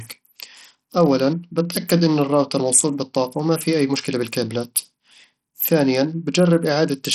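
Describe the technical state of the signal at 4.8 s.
At 4.8 s, as throughout the speech, heavy Bluetooth SBC compression, likely at a starved bit pool consistent with about 64 kbps, leaves gritty, flickering treble with nothing above 16.7 kHz.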